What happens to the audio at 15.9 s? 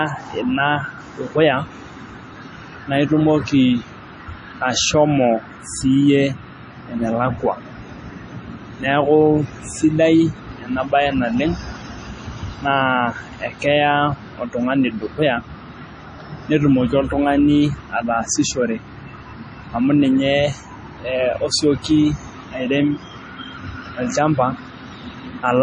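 At 15.9 s the speech carries the heavy damage that runs through the whole clip, likely from MP3 compression at a low bitrate, perhaps around 32 kbps. The encoder cuts everything above 10.6 kHz and drops weak frequency lines, giving a watery, swirly sound with smeared attacks. A spectrogram shows a hard ceiling at 10.6 kHz and blocky, flickering holes below it.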